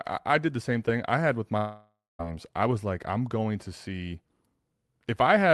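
From 1.57 to 2.21 s, after "thing I had with", the sound smears into a fading buzz, then near-silence for about 0.2 s until "I was like I'm", likely a long network dropout. A spectrogram shows a blurred, decaying tail, then a blank gap, and the waveform flattens.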